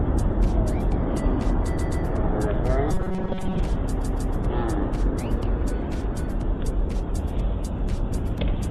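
Throughout, the sound is watery and swirly, with a dulled top end and smeared attacks. That is MP3 compression damage, likely from an encoder starved of bits at a rate that fits about 64 kbps, cutting the treble and switching weak frequency lines on and off between frames.

From 1.77 to 2.03 s, a short fragment stutters: a 130.6 ms block plays twice more, adding 261 ms. These are repeated frames, where the same compressed frames were delivered again and decoded each time.

Between 2.91 and 3.59 s, the sound turns into a rigid metallic buzz at 188 Hz that only loosely tracks the material. This robotic sound from repeated short buffers likely comes from a roughly 5.3 ms stretch being looped to fill gaps during most of that span, while the real audio is skipped.

From 4.01 to 4.33 s, repeated frames return: a 156.7 ms block plays twice more, adding 313 ms.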